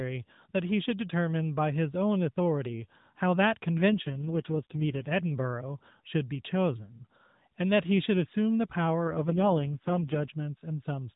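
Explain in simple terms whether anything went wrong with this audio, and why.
Twice the speech briefly turns rougher and more robotic: from 3.91 to 5.09 seconds, and again from 9.04 to 10.32 seconds. That's an AMR rate drop. The mobile link got weak, so the network told the phone's speech codec to use far fewer bits for the voice and spend the rest on error protection. The sound never cuts out and the muffled phone-line tone stays the same. The voice just gets buzzier until the link recovers.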